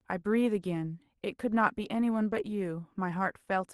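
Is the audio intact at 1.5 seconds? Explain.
Yes, at 1.5 seconds the speech is intact, with no dropout, glitch or other fault at that moment.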